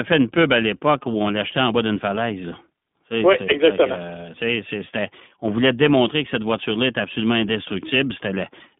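Throughout, the speech carries iLBC codec damage: the band stops near 3.7 kHz and the excitation is rebuilt frame by frame, which fits 20 ms frames at 15.2 kbps. Unlike plain telephone filtering, the roughness is plainly audible, a slightly synthetic graininess.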